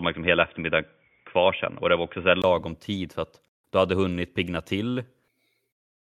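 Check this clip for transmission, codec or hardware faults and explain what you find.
One fault shows up. Input switched to a poorer device, 0 to 2.44 s: the speech is dull and boxy with nothing above 3.5 kHz, likely a narrowband microphone or headset profile. It then clears after a 20 ms gap, about 5 dB different in level, just before "tid för att du".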